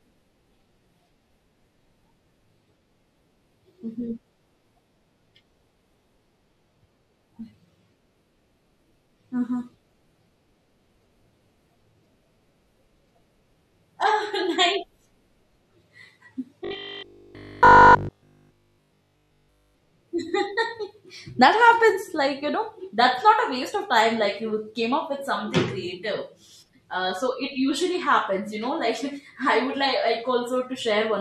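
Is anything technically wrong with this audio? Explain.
Yes, one stretch of the speech is damaged.

From 16.65 to 19.75 s there is robotic sound from repeated short buffers, likely from audio arriving too seldom, so roughly 20 ms chunks are replayed throughout that span. The repetition imposes a rigid 50 Hz metallic buzz. A spectrogram shows evenly spaced horizontal harmonic lines, and the waveform shows identical repeating cycles.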